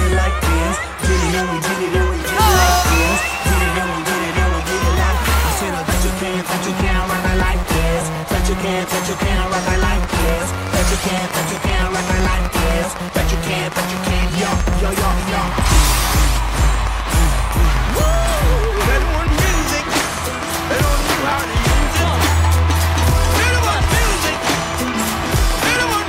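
At 10.04 s a train of clicks begins and runs to 26.03 s. The pulses arrive at a steady 7.88 per second, around 150 in all. Each click has much the same sharp shape. They stand roughly 10 dB above the sound, so they cut through clearly. The ticking carries on through the pauses too. The likely cause is interference from nearby equipment or a faulty connection or power supply injecting a regular pulse.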